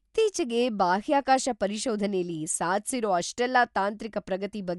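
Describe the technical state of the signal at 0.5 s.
At 0.5 s the speech carries plainly audible codec damage that runs through the whole clip. Nothing sounds above 11.4 kHz, so it is dull. Tones have a rough, fluttering noise. This is likely Dolby Digital compression at a low bitrate, around 64 kbps, with empty lines dither-filled.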